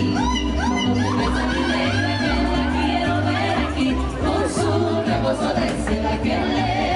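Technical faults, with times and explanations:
No technical faults are audible in this recording.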